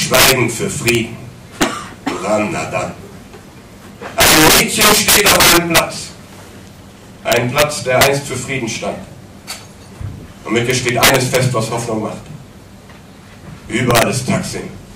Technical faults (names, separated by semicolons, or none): integer overflow